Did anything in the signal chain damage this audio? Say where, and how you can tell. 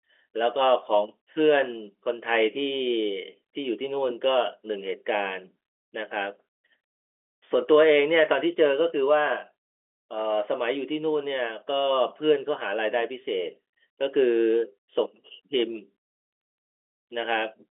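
No, nothing in this speech stood out on listening as damage from any stage of the chain.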